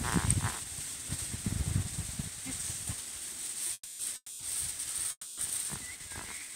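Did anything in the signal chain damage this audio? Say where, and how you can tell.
Yes, the damage is at the network stage, in the receiver's jitter buffer. The first sign is a short stall from a late packet at 3.67 s. The last sound is held for an extra 20 ms and then carries on from the same point, so nothing is lost. A packet simply arrived after its slot.

Next come three call audio freezes, at 3.73 to 4.00 s, 4.16 to 4.40 s and 5.11 to 5.38 s. Each one stretches the last sound into a fading buzz for 230 to 260 ms, ending in roughly 40 to 50 ms of silence, and then the audio resumes where it stopped. The likely cause is packets held up in transit that drained the buffer.

Finally there's a jitter buffer slow-down from 5.97 to 6.52 s. The audio plays at about 84% speed but keeps its pitch, with sounds drawn out. The receiver repeated pitch periods to add 94 ms and rebuild its reserve after those gaps.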